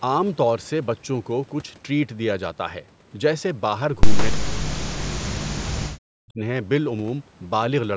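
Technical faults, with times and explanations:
4.17–4.26 s, echo leak: a faint copy of the speech returns about 160 ms late, roughly 10 dB down, likely from incomplete echo cancellation; spectrogram shows a weaker, shifted duplicate.
4.31–4.66 s and 5.03–6.4 s, speech suppressed in double talk: the speech sinks by up to around 40 dB, likely the canceller turning down its own talker along with the echo; the waveform shows collapsed, notched stretches.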